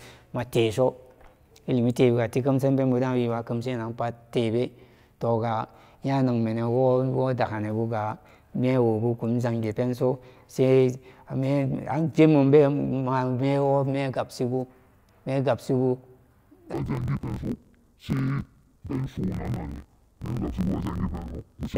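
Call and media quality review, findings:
Interleaved audio read as planar, 16.73 s to end: each 21.8 ms block split into halves, left/right samples misassigned, halves played together at half rate. Speech drops an octave, doubled, choppy at the 45.9 Hz block rate. Probable component: deinterleave stage in the playback path.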